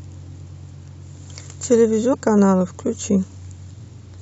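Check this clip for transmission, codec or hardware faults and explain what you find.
One fault is present in the speech. At 2.13 s, damaged data in the compressed stream makes the decoder misread frames and lose sync, producing a brief chirp, squawk, click or short hole.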